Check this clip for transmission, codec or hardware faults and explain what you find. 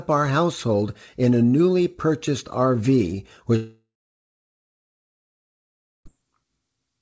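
One transmission fault is present in this speech clip: a long network dropout from 3.56 s to 6.07 s. The call path limits the audio to nothing above 8 kHz, which fits a G.722 wideband codec. At 3.56 s the speech stops and the receiver extends the last sound as a fading buzz, which decays to silence for roughly 2.2 s. Speech resumes at 6.07 s with about 2.5 s of audio missing. The likely cause is a run of lost packets that the jitter buffer had to conceal.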